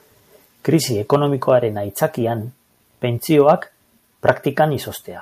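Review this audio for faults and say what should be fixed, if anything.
Harsh, crackling distortion flattens the loudest moments of the speech at 1.13–1.16 s, 3.39–3.52 s and 4.28–4.30 s, worst in the last, where peaks push about 6 dB past full scale against about 2 dB in the others. This is likely microphone overload, with the converter clipping off the waveform tops. Lowering the input gain so that peaks stay several decibels below full scale would prevent it.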